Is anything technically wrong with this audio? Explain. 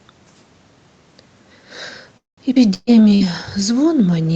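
Yes, several network faults land in the second half of this speech clip, all clustered after about 2.2 s, with the call path's Opus coding audible throughout as a band limited to about 8 kHz.

From 2.17 to 2.40 s there is a call audio freeze. The last sound is held as a short buzz or hiss that fades, then about 170 ms of near-silence follows before the speech picks up exactly where it stopped. The likely cause is packets stalling in transit until the jitter buffer ran dry, so about 200 ms of waiting is inserted but nothing is lost. That distinguishes it from packet loss, where the resumed audio is further along.

At 2.55 to 2.59 s comes a skip ahead. Playback jumps forward almost seamlessly, with only a few milliseconds of fill, but roughly 70 ms of speech is gone. Audio that was already queued was discarded, trimming the built-up delay. Unlike the freeze or a loss burst, there is no audible buzz or hiss at the splice, just an abrupt join where part of a sound disappears.

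Two bursts of packet loss follow. The first runs from 2.74 to 2.90 s: 120 ms of speech is missing, concealed by about 130 ms of fading extrapolation that ends in a brief 20 ms silence. The second, from 3.15 to 3.23 s, drops 60 ms, covered by a similar fading fill. In each, the receiver stretches the last sound while turning it down, then resumes later in the speech. This held-then-gone texture marks it as loss rather than a skip.

A call bitrate drop starts at 2.84 s and lasts to the end, as the encoder falls from 40 to 18 kbps and stays at the lowest rate for about 1.3 s. The bandwidth estimate fell, so Opus codes more coarsely and the speech turns rougher. This is a lasting change in timbre, unlike the brief dropouts around it.

From 2.91 to 3.26 s a jitter buffer slow-down plays the speech at about 89% speed, adding roughly 47 ms. The receiver repeats single pitch periods to rebuild its reserve, so sounds are drawn out while pitch stays the same. 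Because the pitch holds, it sounds like slower delivery rather than a tape-style slowdown, and it overlaps the second loss burst.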